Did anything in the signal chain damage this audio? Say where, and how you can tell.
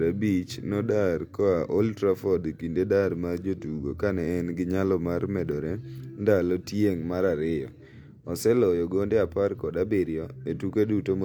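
No, nothing along the signal chain has left an audible mark on this speech recording, from the capture stage through to playback.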